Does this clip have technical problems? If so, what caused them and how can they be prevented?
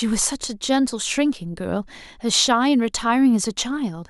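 No, the speech signal shows no technical faults, so there is nothing here that needs a cause or a preventive fix.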